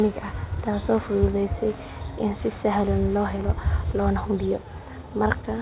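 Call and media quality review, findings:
No faults found in this speech clip.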